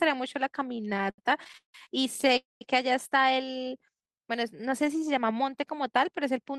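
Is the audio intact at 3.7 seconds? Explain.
No. At 3.7 seconds a jitter buffer slow-down is underway, running from 3.45 to 5.06 s. The receiver repeats single pitch periods to build its reserve, adding 192 ms. Speech plays at 89% speed with unchanged pitch, so sounds are drawn out.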